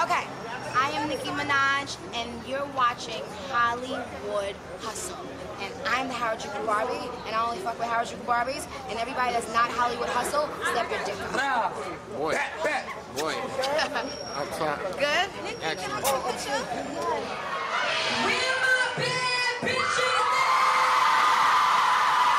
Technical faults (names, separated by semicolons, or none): none